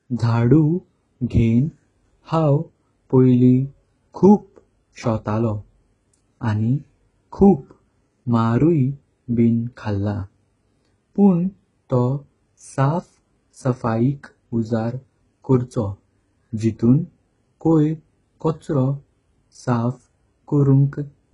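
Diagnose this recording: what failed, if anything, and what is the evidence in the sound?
The failure is at the codec stage, throughout the speech. Nothing survives above 11.1 kHz. The remaining treble sounds synthetic, and s sounds come out gritty and lispy. This is likely HE-AAC compression, copying lower bands upward to fake the highs. The heavy damage fits a bitrate near 12 kbps.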